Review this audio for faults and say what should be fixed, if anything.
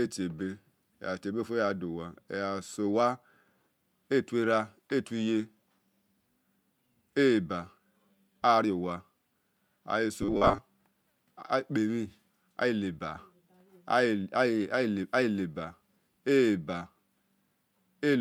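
Audio likely arrived too seldom from 10.22 to 10.58 s, and repeats of a 10 ms buffer gave robotic sound: a rigid, metallic 100 Hz buzz. Fix it with a larger jitter buffer or faster delivery so that real audio, not a repeated buffer, fills each gap.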